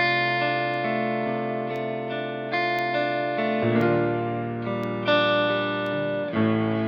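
From 0.74 s to about 5.87 s the music has periodic USB or driver dropouts: a tick every 1.02 s, where something stalls the bus or driver on a fixed cycle and a tiny sliver of audio, far under a millisecond, is replaced by silence.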